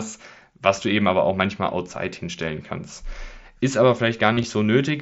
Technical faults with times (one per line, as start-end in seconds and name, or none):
2.38 concealed Bluetooth headset packet loss
4.33-4.44 concealed Bluetooth headset packet loss